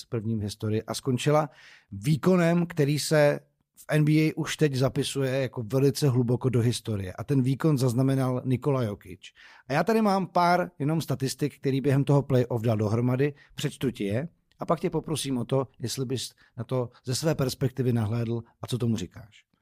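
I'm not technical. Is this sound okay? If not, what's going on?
Yes, it's fine: nothing in this recording sounds wrong or broken, so you can relax about it.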